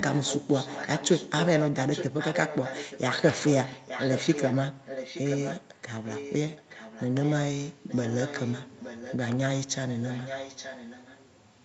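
A delayed copy of the speech trails it by about 0.87 s. It is heard at 0.0–1.47, 1.73–4.55, 4.85–5.81, 6.06–6.35, 6.56–7.35, 7.88–9.32 and 10.04–11.21 s. This is likely an echo leak. A loudspeaker on one side fed the sound back into its microphone, and the echo canceller let part of it through. The copy is loudest from 1.73 to 4.55 s, only a little below the speech. It is faintest from 6.56 to 9.32 s.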